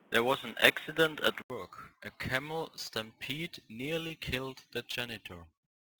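A speech clip where the first 1.5 seconds sound dull and boxy, with nothing above 3.8 kHz, a bit of extra hiss and a level jump of about 5 dB, then an 80 ms gap before it opens up, likely an input switched to a poorer device. Throughout there's a rough, hissy edge that follows the loud, bright parts, which points to sample clock jitter on the order of 10 microseconds. At 4.07 s and 4.91 s you get brief smears, about 20 ms and 16 ms long, from short concealed packet loss, where the decoder patched the holes by extending the preceding sound.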